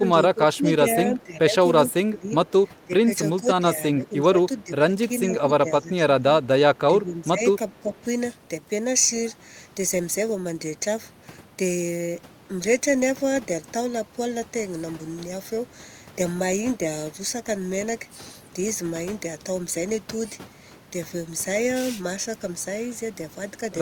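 The speech keeps sinking in the first eight seconds, from 0 to 1.54 s, 1.88 to 2.53 s, 2.85 to 6.24 s, 6.9 to 7.43 s and 7.79 to 7.98 s. It dips by around 10 to 15 dB at worst. That's speech suppressed in double talk, likely an echo canceller ducking the talker while the far end spoke too.

Two faint echo leak blips also turn up, at 4.58 to 4.64 s and 7.73 to 7.79 s. Each is a scrap of the voice coming back 406 ms late, sitting roughly 35 to 40 dB under the speech. That points to loudspeaker pickup the canceller didn't fully clear.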